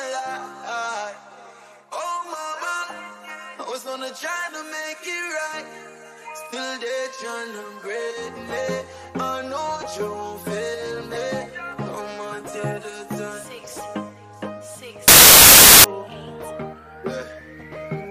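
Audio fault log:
15.08 to 15.84 s, samples built from the wrong bytes: for about 0.76 s the sound turns into a burst of loud, harsh broadband noise. The reader misassembles each sample's bytes, shifted or swapped, so the rapidly changing low bits land in the high positions and dominate every value.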